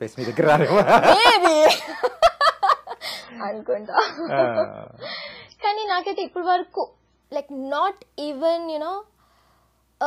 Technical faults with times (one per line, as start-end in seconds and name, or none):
3.23-7.23 adaptive stream at a lower bitrate